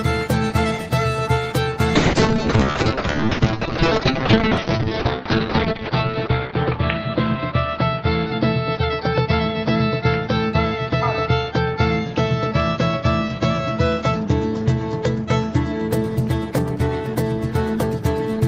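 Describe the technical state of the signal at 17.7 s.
At 17.7 s the signal is intact, with no audible fault at that moment.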